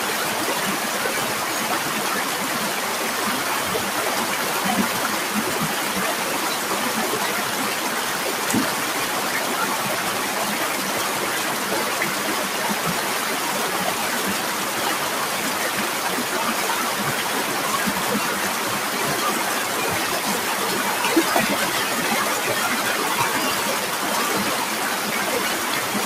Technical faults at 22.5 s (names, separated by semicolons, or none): none